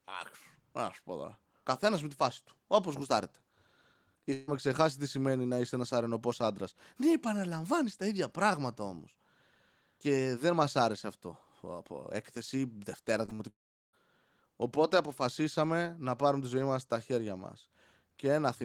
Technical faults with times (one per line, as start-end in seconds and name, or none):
4.33-4.49 burst of packet loss
13.25-13.41 short concealed packet loss
13.49-13.95 long network dropout